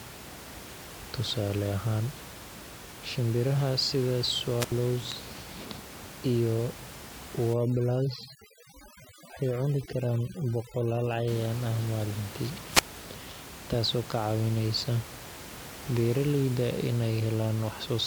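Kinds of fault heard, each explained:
Wireless microphone squelch dropout: A fading radio signal let the receiver mute the output. Near 4.6 s, after "shinbiraha sida", about 76 ms goes silent; near 12.7 s, after "ah maalintii", about 173 ms.
Overdone noise removal: Noise reduction was set too strong. From 7.53 to 11.28 s, before "ah maalintii", the background drops and breaks up into twinkling specks.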